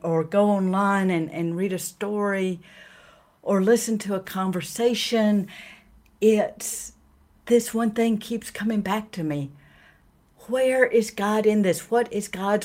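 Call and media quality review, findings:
Nothing to flag on this speech recording: no audible problems anywhere in it, so no tickets to raise.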